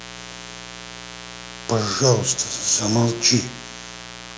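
Mains buzz runs throughout this speech clip, a steady raspy 60 Hz buzz sitting roughly 15 dB below the speech. Sharp switching spikes, likely from a dimmer, rectifier or unshielded cable, leak in twice per mains cycle, spraying harmonics well up the spectrum under the call's microphone processing, which caps content at 8 kHz.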